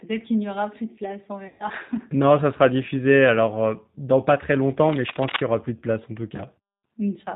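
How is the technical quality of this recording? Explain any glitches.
Technical quality is fair at best: the whole recording carries the sound of a low-bitrate phone codec, and there are three distinct glitches on top of that.

Throughout, you're hearing the G.729 codec at 8 kbit/s, and the damage is plainly audible. The codec doesn't send the waveform. It sends a vocal tract filter, a pitch predictor and a handful of pulses per frame, and the decoder rebuilds speech from those. So nothing above 4 kHz survives, and the speech comes out intelligible but rough and a bit synthetic.

From 1.48 to 1.69 s there's VoIP packet loss concealed by the speech codec, with about 120 ms of audio missing, which fits roughly six lost 20 ms packets. With no data arriving, the decoder keeps extrapolating from the last pitch and filter it had and turns the gain down frame by frame. The sound smears into a buzzy tone or coloured noise that fades. 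Because each frame builds on the previous one, the speech stays weak or distorted for a short while after packets resume. The same thing happens briefly from 6.36 to 6.42 s. That gap is about 20 ms, consistent with a single lost packet.

From 4.70 to 5.43 s there's cable scratch noise: dense, uneven bursts of scratching and rustling laid over the speech, almost as loud as the speech itself. The likely cause is a worn cable, connector or control being moved. Its contact resistance jumps around rapidly, and every jump injects a burst of noise into the signal for as long as it's disturbed.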